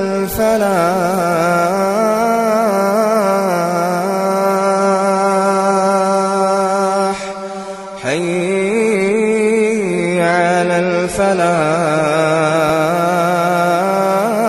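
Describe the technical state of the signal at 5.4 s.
At 5.4 s the audio sits inside a stretch from 4.57 to 12.57 s where an adaptive stream at a lower bitrate has taken over. The quality drops suddenly with no gap, nothing remains above 11.5 kHz, and coding artefacts grow, pointing to a much leaner encode after the connection slowed.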